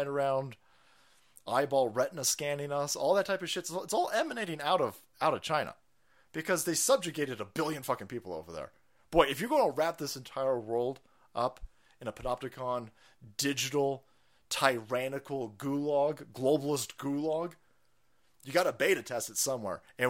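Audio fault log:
No faults are audible anywhere in this speech recording.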